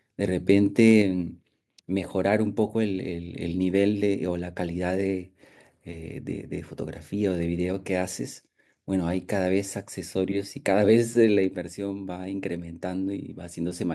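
Microphone overload at 0.79 to 0.92 s puts a harsh, crackling edge on the loudest peaks of this speech clip. The waveform tops are flattened, about 1 dB past the converter's limit on a small fraction of samples, most likely because the input volume was set too high for the converter. Microphone volume stepped down at 1.02 s and again at 11.55 s: the voice and background drop together, by about 5 dB and then about 3 dB. That points to automatic gain control cutting the device's input level in single steps after detecting a level that was too hot.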